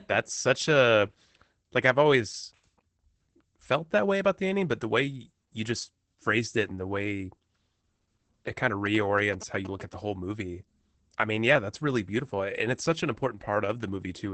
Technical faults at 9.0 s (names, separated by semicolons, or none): Opus voice compression; GSM signalling bursts